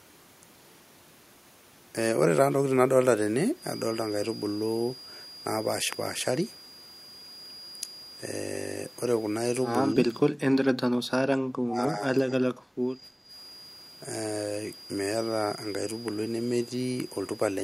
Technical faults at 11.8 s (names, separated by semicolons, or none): feedback whistle; speech suppressed in double talk